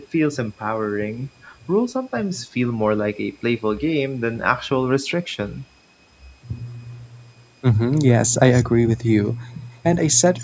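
A faint, steady high whistle sits under this speech recording throughout, wandering between about 2.4 kHz and 2.6 kHz at roughly 45 dB below the talker. It is a switching supply whistle: a switching power supply running in an audible burst mode, or beating against another, leaks its tone into the audio. From 8.53 to 8.64 s, and again from 10.39 to 10.44 s, a short, quieter copy of the speech trails the original by 247 ms and 253 ms respectively, sitting about 20 dB down. This is an echo leak, likely from a far end playing the call over a loudspeaker whose echo canceller let part of that pickup return.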